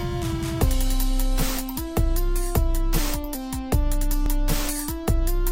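At 1.77 s and again at 4.26 s the sound jumps ahead by a few milliseconds with no gap of silence, a tiny skip. The even 2.5 s spacing points to audio missing between chunks, likely lost as one chunk closed and the next opened.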